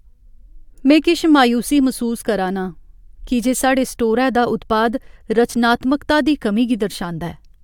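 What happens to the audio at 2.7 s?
Nothing goes wrong at 2.7 s; the speech carries on cleanly through that moment with no dropout, click, distortion or other audible fault.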